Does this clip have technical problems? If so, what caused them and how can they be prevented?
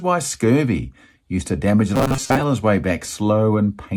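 Yes. From 1.96 to 2.41 s the speech turns into a rigid metallic buzz at 133 Hz, robotic sound from repeated short buffers. This likely comes from audio arriving too seldom, so a roughly 7.5 ms slice repeats through most of that stretch. A larger jitter buffer or steadier network delivery would prevent it.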